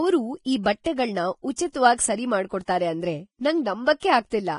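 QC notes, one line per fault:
Throughout: Vorbis compression, likely the cause of the hissy, grainy texture on this speech. Nothing survives above about 10.5 kHz, and the treble that remains is quantised so coarsely that detail turns to noise. This points to a low bitrate near 29 kbps. Unlike plain band-limiting, the top end sounds rough rather than just dull.
1.72–1.74 s: pre-echo, a brief hiss of about 26 ms that runs ahead of a sharp onset and leaves the attack smeared. The codec's quantisation noise, sized for the loud part of its block, leaks into the quiet moment before it. Because this hiss comes before the transient and is gone once it starts, it is not ordinary broadband hiss.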